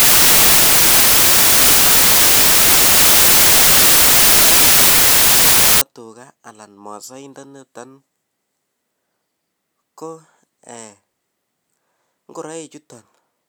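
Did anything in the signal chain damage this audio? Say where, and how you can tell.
Yes: sample-format conversion assembled samples from the wrong bytes from 0.0 to 5.81 s, promoting noisy low bits to the top, so the speech becomes loud hiss.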